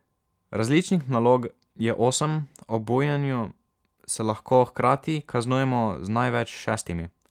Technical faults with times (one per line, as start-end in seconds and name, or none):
none